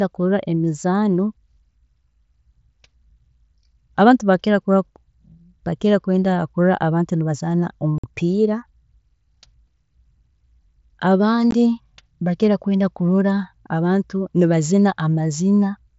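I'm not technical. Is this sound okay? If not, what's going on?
No. There is unconcealed Bluetooth headset packet loss, first from 7.98 to 8.04 s and again briefly at 11.51 s. Between the headset and the phone, speech travels in tiny packets a few milliseconds long. Here some never arrived, and nothing filled the gap, so the speech simply stops with abrupt edges. The first hole, about 50 ms, is a chop. The second, about 15 ms, is a shorter break.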